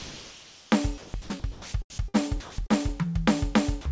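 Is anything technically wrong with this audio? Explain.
Yes, there are two related problems, both around the quiet moments in this music. The audio runs through a call path with nothing above 8 kHz, which fits G.722 at 64 kbps.

From 0 to 0.72 s you get comfort noise in place of the background. The real ambience, sitting about 24 dB below the loud parts, is swapped for a smooth, featureless hiss at about the same level. The sender most likely treated this stretch as silence and stopped transmitting, so the receiver just generated shaped noise to fill the gap.

Between 0.98 and 3.02 s the sound is chopped by the voice detector. It keeps flipping between sending and muting, and about 0.81 s in total gets replaced by that synthetic noise. Softer musical passages and note edges drop out. The likely cause is a detector tuned for speech that can't follow quieter music, so it gates the music choppily.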